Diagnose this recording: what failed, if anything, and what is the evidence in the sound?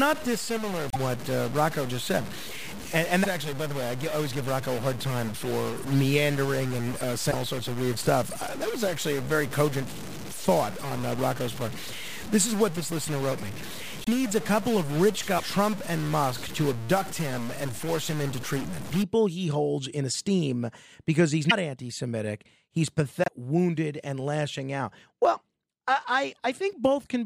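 From the start to about 19.0 s, the speech carries a distortion that follows the shape of the waveform, and the pauses fill with noise instead of falling silent. This points to the converter or its data wiring, with a stuck bit as the likely cause. One data bit held at a fixed value pushes about half the samples off by that bit's weight, and because the error flips with the sign of quiet signals, the gaps turn noisy. Clipping would only appear on loud peaks, and hiss would not follow the signal as this does.

Six short disruptions occur at 0.90, 3.23, 7.30, 14.04, 21.49 and 23.24 s, each lasting about 30 to 60 ms. At each one the audio skips ahead and the next moment comes out as a chirp, a noise burst or a brief hole. Each event spans about one to two 26.1 ms frames, which places the fault in the codec stage. The likely cause is a broken MP3 bit reservoir. Frames were lost, and the frame that followed reached back for borrowed data and decoded bytes belonging to another frame. 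A plain network dropout would leave a clean gap, but here a skip combined with a garbled burst sets it apart.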